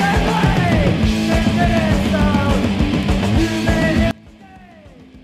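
At 4.11 s the sound suddenly drops by about 26 dB and stays faint right to the end at 5.23 s, with the shared content all but gone. That's the classic signature of one channel inverted: with one side's polarity likely flipped, everything shared between left and right cancels once they're folded to mono, and all you're left hearing is the faint difference between the two channels.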